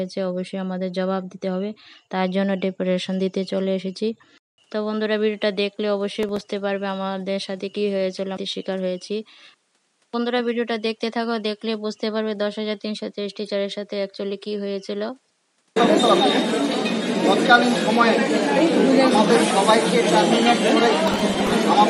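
At 4.38 s the sound goes quiet for 200 ms, then returns about 5 dB lower and duller, with content cut off above 11.4 kHz and a new noise floor. This is likely an input switched to a poorer device. The spectrogram shows a flat ceiling at 11.4 kHz, and the waveform shows a gap followed by a smaller envelope. From 6.23 to 6.41 s, and again from 21.08 to 21.53 s, processor overload crackle adds gritty tearing. Short stretches of old audio repeat with hard edges, which fits buffers of roughly 3 ms, and the waveform shows jagged step discontinuities.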